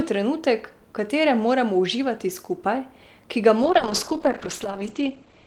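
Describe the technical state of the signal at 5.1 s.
At 5.1 s the speech is inside a call bitrate drop that begins at 3.63 s, right after "uživati skupaj ki ga", and runs to the end of the clip. The encoder's rate falls from 32 to 12 kbps, staying at its lowest for about 1.2 s, so the speech is coded coarsely and sounds muffled and watery. On a spectrogram the content above 8 kHz disappears in a flat ceiling, down from 20 kHz.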